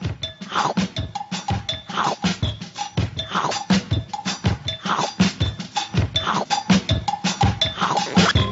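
No technical faults can be heard anywhere in this recording. Nothing in the audio breaks, drops out or changes unexpectedly at any point.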